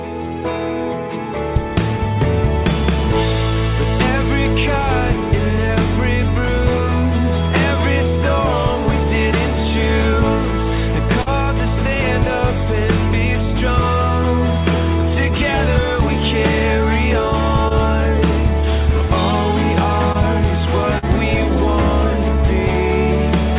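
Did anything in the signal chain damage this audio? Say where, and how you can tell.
Yes. The damage comes from short concealed packet loss on the network leg of the call, at 11.22, 17.68, 20.12 and 20.98 s. Each gap lasts 20 to 40 ms. The receiver covers it by extending the preceding sound, and that leaves a brief smear or wobble. The band stops at about 4 kHz, which fits a G.711 mu-law call codec.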